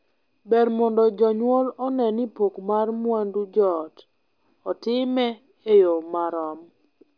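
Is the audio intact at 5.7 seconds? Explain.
Yes, the speech at 5.7 seconds plays through intact, with no audible dropout, click, distortion or other fault at that moment.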